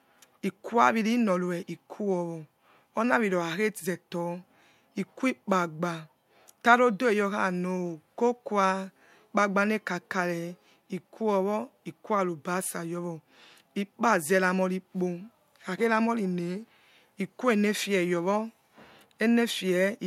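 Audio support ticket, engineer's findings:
No faults found on listening; the speech comes through steady with no dropouts, glitches or level jumps to chase down.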